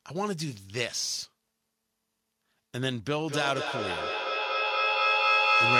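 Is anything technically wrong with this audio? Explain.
Yes. From 3.28 s to the end, the speech comes back at roughly a fifth of a second and builds up instead of fading, peaking about 6 dB above the speech itself. This is feedback echo between two devices: one device replays another's microphone, which picks it up again, beyond either echo canceller's reach.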